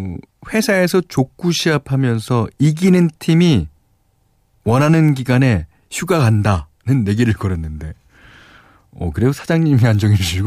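No technical faults can be heard anywhere in this speech recording.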